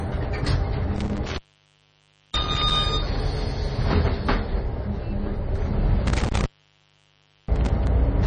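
Throughout the clip the sound carries heavy coding damage, likely MP3 compression at a low bitrate, around 26 kbps. Nothing is present above 9 kHz, and weak spectral detail flickers in and out between frames, giving a watery, swirling texture with smeared attacks.

From 0.96 to 2.76 s and again from 6.07 to 7.87 s there is intermittent contact, where a loose connection opens. The signal breaks up and drops out for about 0.96 s in the first span and about 1.02 s in the second, with crackle where the line opens and closes.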